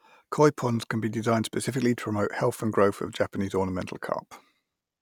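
Nothing technical stands out in this short bit of speech; there's no fault to point to anywhere in it.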